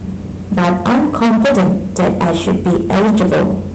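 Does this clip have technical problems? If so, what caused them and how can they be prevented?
Yes. Throughout the speech there is a harsh, buzzing fuzz riding on every loud syllable rather than occasional crackle. This is hard clipping: the signal was driven about 20 dB beyond what the stage could pass, so around a fifth of the samples hit the ceiling and were sliced flat, and those squared-off tops spray harmonics high into the spectrum. The call codec's band limit cuts off around 8 kHz. To prevent it, lower the input gain or enable automatic gain control so peaks stay below full scale before the signal reaches the converter or encoder.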